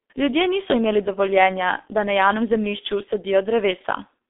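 Speech coded through the G.723.1 codec throughout. Nothing passes above 3.8 kHz, so it sounds muffled and hoarse. Consonants smear, pointing to a roughly 6 kbit/s rate.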